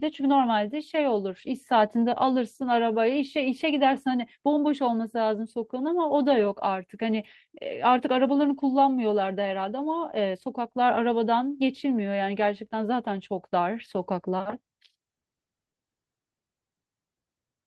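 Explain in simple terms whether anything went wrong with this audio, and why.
Nothing went wrong with this audio: the speech came through an ordinary internet call connection that did its normal job without adding any fault.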